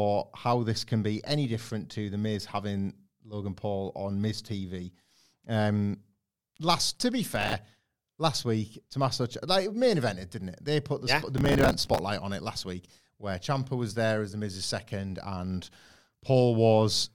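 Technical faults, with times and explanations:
7.36–7.53 s and 11.38–11.99 s, processor overload crackle: the processor repeatedly failed to finish its short audio buffers on time. Each miss replayed a stale slice of old audio with abrupt edges. The gritty texture fits buffers of around 5 ms. The first burst comes right after "last to be" and is brief. The second is longer, a sustained tearing that ends just before "on it last week".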